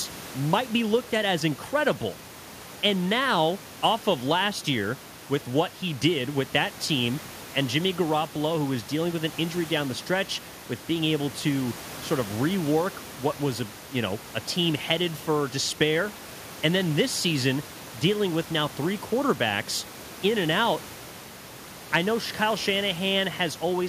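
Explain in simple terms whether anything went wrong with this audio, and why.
Nothing went wrong technically with this speech recording: the signal stays steady throughout, and the faint background noise of the room sits well beneath the speech as a natural part of where it was recorded rather than a fault.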